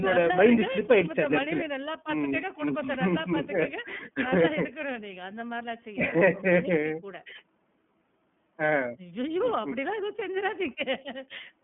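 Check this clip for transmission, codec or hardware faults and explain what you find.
The speech carries iLBC codec damage from start to finish. Each 30 ms frame's excitation is coded independently of the previous one, which fits the 13.33 kbps mode, and the band is limited to 150 Hz to 3.4 kHz. The speech sounds plainly rough and slightly synthetic. On a spectrogram it shows a hard ceiling at 3.4 kHz.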